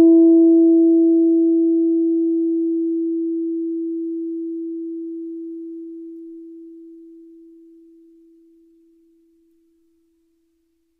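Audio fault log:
No faults detected.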